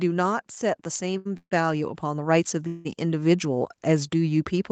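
From 0.6 s the speech and the background noise behind it swell together, climbing steadily by about 10 dB until the level settles at 4.16 s. Nothing in the sound itself gets louder. This is automatic gain rising: the gain control judged the microphone input too quiet and kept turning its gain up, so the noise floor rises in step with the talker.

At 1.17 s a sound is held for about 79 ms too long, with a faint buzzy sustain, before the speech resumes from exactly where it left off until 1.27 s. This is a short stall from a late packet. The expected packet had not arrived, the jitter buffer ran dry, and the receiver stretched the last sound to cover the wait. Nothing is lost, but the timing is pushed back by that 79 ms.

Two longer breaks follow, each a call audio freeze. From 1.37 s to 1.53 s the last sound continues as a fading buzz and then drops into about 70 ms of silence. From 2.67 s to 2.87 s a similar fill runs for about 178 ms without falling silent. 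The likely cause is packets held up in transit, emptying the jitter buffer. When they arrive the speech picks up where it stopped, so gaps of about 139 ms and 178 ms have been inserted rather than anything cut. Throughout, the band stops at 8 kHz, as the call path and microphone processing would leave it.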